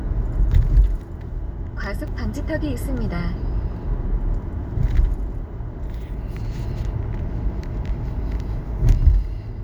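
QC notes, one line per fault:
2.07 s, chunks out of order: a brief jumbled moment, a tiny stutter where the sound seems to hiccup, packed into roughly 11 ms. One block of about 5.33 ms arrived one block late and plays after the block that should have followed it. Nothing is missing, but the swap creates three hard joins where the waveform jumps.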